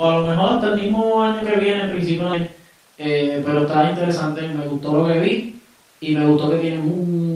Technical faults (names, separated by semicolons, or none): skip ahead; jitter buffer speed-up